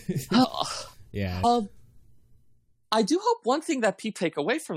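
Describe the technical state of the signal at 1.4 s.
At 1.43 s there are compressed frames skipped: about five frames, which fits a frame length near 23 ms, were left out, so the audio jumps ahead by roughly a tenth of a second. The join is heard as a brief smeared blip or a hard click, depending on the codec. On a spectrogram it shows as a thin vertical seam where the speech pattern changes abruptly, and in the waveform as a discontinuity where the wave shape changes suddenly.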